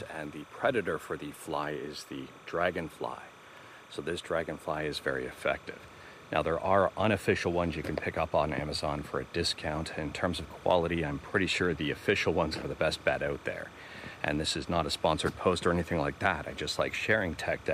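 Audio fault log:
Throughout: timecode bleed. A steady chirping warble sits behind the sound for the whole clip, roughly 25 dB below the programme level. Linear timecode from a neighbouring track or cable is leaking into the audio path. The code is a square wave flipping between two pitches near 1 kHz and 2 kHz as it encodes bits, and its frames repeat at 29.97 per second, giving the rapid, regular chatter heard under the material.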